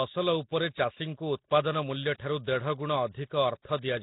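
From start to finish the speech carries heavy coding damage: a rough, hissy halo around every syllable and a smeared, underwater quality. This is likely Nellymoser compression, the old Flash microphone codec, which spends a fixed two bits per sample on 256-sample blocks, starves weak bands and fills them with noise. The sound points to a rate near 16 kbps. On a spectrogram, energy stops dead at 3.9 kHz, with grainy noise patches between harmonics and blocky smearing in time.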